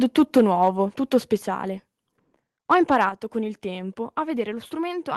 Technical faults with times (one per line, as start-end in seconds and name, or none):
0.18-0.68 microphone overload
1.38 microphone volume stepped down
2.71-3.05 microphone overload
3.09 microphone volume stepped down